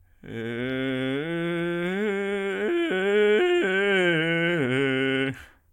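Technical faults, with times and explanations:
Listening to this music clip, nothing stood out as a technical problem at any point.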